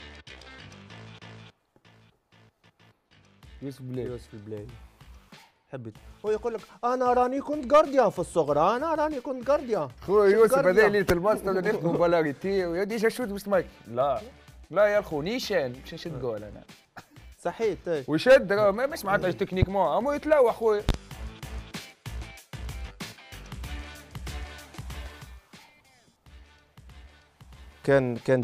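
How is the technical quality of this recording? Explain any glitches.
Two loud pop events, three pops in all, interrupt the recording. A voltage pulse, likely from a plug, switch, static discharge or driver glitch, briefly landed on top of the signal: one sharp pop at 19.62–19.65 s, roughly 15 dB above the sound, then a double pop at 20.89–20.97 s, around 20 dB above, with the audio continuing underneath.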